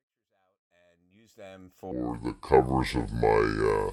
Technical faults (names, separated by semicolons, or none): section at the wrong speed